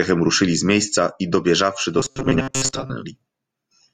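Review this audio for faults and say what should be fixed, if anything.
Robotic sound from repeated short buffers, 1.99 to 2.92 s: a metallic 133 Hz buzz, likely a 7.5 ms buffer replayed while fresh audio is skipped. To prevent it, keep enough input buffering that playback never runs short of new audio.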